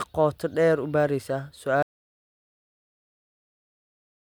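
An audio dropout to silence begins at 1.83 s and lasts to the end: the speech cuts off into silence, likely from a lost input.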